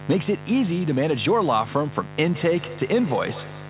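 From the first moment to the end, mains buzz sits under the speech at around 15 dB below it. Its raspy edge comes from sharp switching spikes repeating twice per 50 Hz cycle. That edge, with harmonics climbing toward the band's 4 kHz ceiling (which fits a narrowband call codec), separates it from a smooth, pure hum.

At 2.18 s a feedback echo between two devices begins and runs to the end. A second device's speaker is replaying the call into a nearby microphone, whose echo canceller cannot remove sound it did not play. Repeats return roughly every 150 ms, peaking about 17 dB under the speech. The fixed spacing and the growing thin, ringing quality set it apart from room reverberation.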